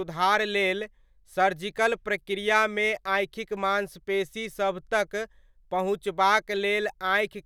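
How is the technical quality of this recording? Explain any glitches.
No glitches or technical faults can be heard here.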